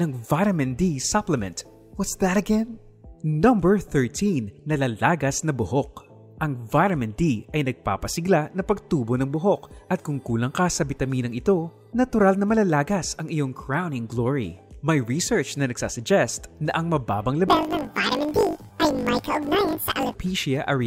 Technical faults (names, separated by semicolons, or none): planar audio read as interleaved